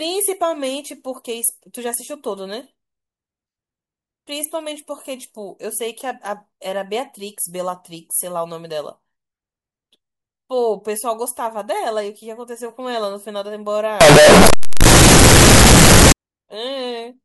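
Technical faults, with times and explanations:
14.01 to 16.12 s, float read as integer. The speech becomes a loud, harsh, near-square wave. The likely cause is 32-bit float samples read as integers, so exponent bits set the level.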